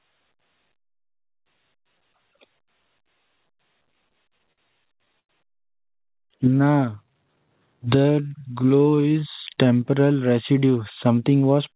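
Repeated stalls (stutter) hit at 3.95–5.31 s and again at 5.87–6.57 s. Packets arrived late, the jitter buffer kept emptying, and the receiver stretched the last sound across 13 short gaps, the longest 96 ms, then 10 briefer ones, so the speech drags and hiccups without losing anything.

A jitter buffer slow-down follows from 6.48 to 9.92 s. To rebuild its reserve, the buffer repeated single pitch periods and slivers of pauses, adding 450 ms. The speech plays at 87% speed with its pitch unchanged, sounding drawn out, over a call path that carries nothing above 4 kHz.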